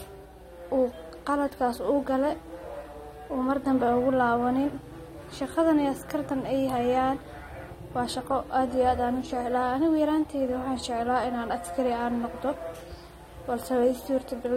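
A steady mains hum runs from start to end: a 60 Hz tone, about 25 dB under the speech, fixed in pitch and level, unlike rumble or wind. Throughout, the speech also sounds dull and smeared, with warbling on sibilants and nothing above 15.9 kHz, likely AAC compression at a rate near 32 kbps, not simple low-pass filtering.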